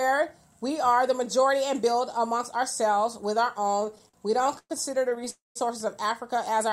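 From 3.61 to 4.72 s the audio drags and stutters, breaking into a run of brief holds, the longest about 111 ms, that together make up roughly a quarter of that stretch. These are repeated stalls (stutter). Packets reached the receiver late or more slowly than they were played out, so its jitter buffer kept emptying. Each time, the last sound was carried forward until data arrived, so nothing is lost but the flow is chopped up. A shorter burst of the same stutter follows from 5.10 to 5.28 s, with four tiny holds of no more than 12 ms each.

Directly after, from 5.30 to 5.57 s, the sound hangs on a held, fading tail and then drops into about 170 ms of silence before resuming where it stopped. This pattern points to a call audio freeze, likely from packets held up in transit until the jitter buffer ran dry. The receiver stretched the last sound to bridge the wait, inserting roughly 256 ms of delay without skipping any audio.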